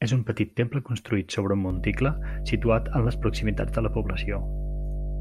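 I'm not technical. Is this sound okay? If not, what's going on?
No. From about 1.7 s, right after "temple construït sobre un", a steady low buzz at 50 Hz (mains hum) joins the speech and stays fairly loud until the end. Electrical wiring is leaking into the recording. Unlike hiss, it is one deep, unchanging tone.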